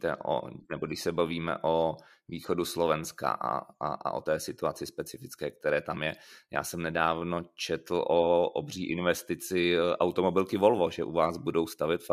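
Nothing in this recording stood out as a problem on listening.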